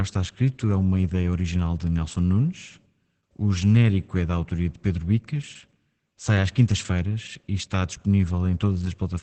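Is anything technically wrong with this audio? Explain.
Yes. Throughout the speech, the voice sounds muffled, hoarse and faintly robotic, with nothing above about 8.5 kHz. This is heavy Opus voice compression in its SILK mode at wideband. SILK models the voice with linear prediction and spends very few bits on the excitation signal, so the natural grain of the voice is replaced by a coarse, buzzy approximation. The damage level and the band limit point to a bitrate of roughly 10 kbps.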